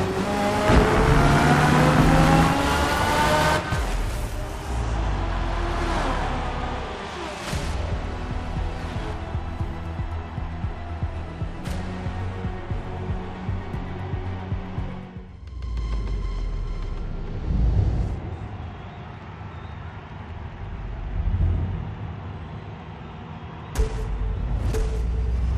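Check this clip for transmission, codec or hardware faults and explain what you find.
Nothing stood out on listening to this clip that would point to a problem in how it was transmitted, encoded or captured.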